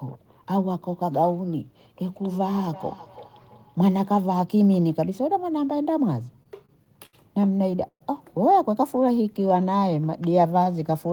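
Speech, with four distinct faults. From 2.09 to 4.3 s there is feedback echo between two devices. Each phrase returns roughly every 300 ms, at about 22 dB below the speech. A second device in the room is replaying the call into an open microphone, and that microphone's echo canceller cannot remove it. Repeated stalls (stutter) follow from 6.27 to 7.15 s and from 7.59 to 8.02 s. The audio catches and drags in six short holds, then four, with the longest at 128 ms. Late packets kept emptying the jitter buffer, so the receiver stretched the last sound while it waited. Scattered short gaps appear from 8.96 to 9.79 s. About seven tiny hiccups, the longest around 10 ms, mark single lost packets patched over by concealment. A jitter buffer slow-down runs from 9.0 to 11.11 s. The speech plays at 91% speed with the pitch unchanged, because the receiver repeated pitch periods to add 203 ms of reserve.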